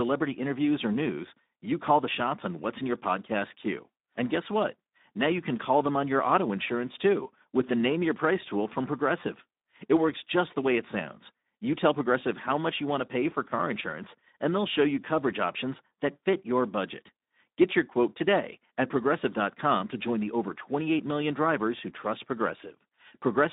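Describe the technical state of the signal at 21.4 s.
At 21.4 s, as throughout the clip, the speech has passed through the Speex codec over a narrowband line of roughly 200 Hz to 3.7 kHz, consistent with a bitrate near 11 kbps. Too few bits for the excitation make the speech plainly noisy and hoarse, with nothing above 3.8 kHz.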